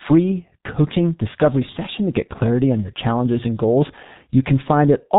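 Speech runs through a G.723.1 codec for its whole length, and the damage is heavy. Nothing survives above 4 kHz, so the sound is muffled, and the coarse 30 ms frames with their slowly updated voice model leave a hoarse texture and smeared consonants, a result that points to a bitrate of about 6 kbit/s. A plain low-pass filter would also dull the top end, but it would keep consonant onsets crisp and add no roughness.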